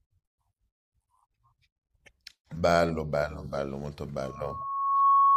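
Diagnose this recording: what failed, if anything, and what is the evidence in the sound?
A microphone in the analogue chain picked up the loudspeaker it was feeding, so loop gain passed unity at 1.1 kHz. That loudspeaker feedback squeal starts at 4.23 s as a pure tone, swells over about a second and ends roughly 10 dB above the speech at 5.37 s.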